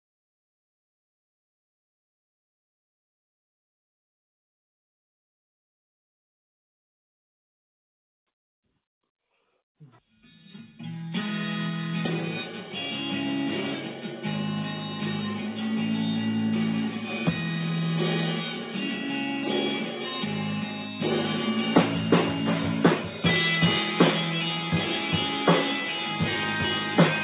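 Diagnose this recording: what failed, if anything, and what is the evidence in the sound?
Nothing failed: the only notable trait is that the sound stops at 4 kHz, which fits a narrowband G.711 mu-law call path working as designed rather than any fault in the chain.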